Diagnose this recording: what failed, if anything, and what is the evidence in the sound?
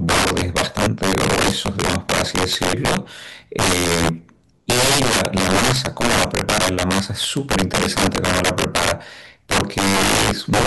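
Violent, snapping cracks burst out of the louder syllables throughout the speech, far harsher than ordinary clipping. This is integer overflow at a sample-format or gain stage: driven about 14 dB too hot, a small share of samples, perhaps one in fifteen, wrap to the opposite extreme instead of limiting.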